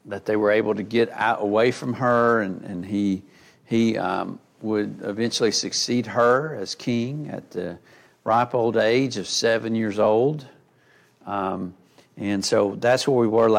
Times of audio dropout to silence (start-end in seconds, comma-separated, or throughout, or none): none